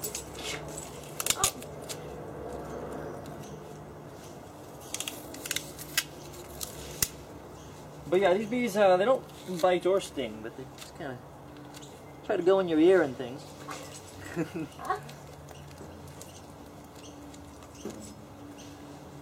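Frames out of order hit the audio between 16.26 and 16.40 s: two neighbouring runs of data reached the decoder in swapped order and were played back as received. The sound points to single-frame runs of about 46.4 ms each. That short stretch comes out with its two halves exchanged, giving a brief garbled flutter. No time is lost, so everything after the swap stays in place.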